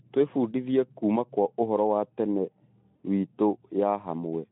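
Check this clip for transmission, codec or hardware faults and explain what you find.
One fault, a brief dropout in the transmission. At 2.96 to 3.01 s the speech smears into a short buzzy tone or coloured noise that fades: VoIP packet loss concealed by the speech codec. About 40 ms of audio went missing, consistent with two 20 ms frames, and the decoder filled the gap by extending its last pitch and filter at falling gain. The speech arrives through a Speex codec at 15 kbps on a narrow 150 Hz to 3.5 kHz line.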